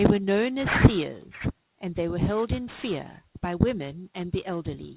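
Sibilants and fricatives in this speech clip sound gritty and metallic from start to finish, with a harsh, unnatural buzz riding on the consonants and energy packed right up to a hard ceiling near 4 kHz. This is aliasing: the audio was downsampled without an anti-aliasing filter, so content above 4 kHz folded back into the audible band as false tones. The audio was dropped from 44.1 kHz to 8 kHz, and the folded energy sits roughly 15 dB below the speech.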